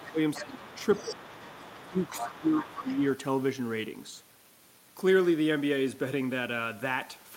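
Right from the start, 0.0 to 0.19 s, the speech gets pushed down by around 15 dB. That's speech suppressed in double talk, and it comes back at 0.4–0.79, 1.02–1.22, 1.89–2.03 and 2.21–3.01 s. The likely cause is the echo canceller ducking everything while both ends talk at once. Overlapping those dips, the other side's voice is leaking through: a brief scrap at 0.06–0.12 s, a long stretch from 0.34 to 2.45 s, and again at 2.79–3.02 s, sitting roughly 15 to 20 dB under the talker. It's likely leftover loudspeaker echo that the canceller didn't fully strip out of the mic.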